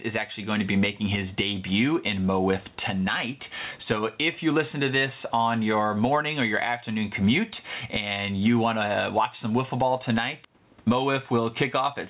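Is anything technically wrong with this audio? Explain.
Yes: gain pumping runs through the whole clip. The input gain is likely set far too high, so a fast limiter clamps down on each loud speech burst, swinging the level by roughly 15 dB. The loudness sounds squashed. The faint room noise, about 44 dB below the speech, is normal, and the call path's 4 kHz bandwidth ceiling fits a narrowband G.711-type codec.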